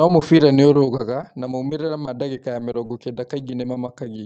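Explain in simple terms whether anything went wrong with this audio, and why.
Lost packets rebuilt from error correction, at 2.66 to 2.72 seconds and again at 2.84 to 2.90 seconds. In each place about 60 milliseconds of speech went missing on its way through the call, but the following packet carried a rough backup copy. The receiver played that backup instead, so there's no silence or dropout, just two brief patches where the sound turns grainier and noisier than the surrounding call audio.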